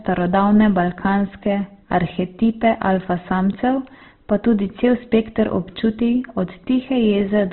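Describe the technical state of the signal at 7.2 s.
Clock slip clicks are still present at 7.2 s, near the end of a run from 0.59 s to 7.29 s. They are faint, regular ticks, about one each second, roughly seven in all. Each sounds like a single sample being dropped or repeated. The likely cause is two devices running on unmatched clocks, a few tens of parts per million apart. Each time the drift adds up to a whole sample, one slips.

Opus compression also affects this moment, as it does the whole speech clip. Nothing is heard above 4.1 kHz, so the sound is narrowband and muffled. Damage is heavy. Tones turn rough, grainy and noisy rather than swirling. This fits the encoder's CELT music mode at a very low rate, likely near 12 kbps. Bands starved of bits get filled with folded or noisy content.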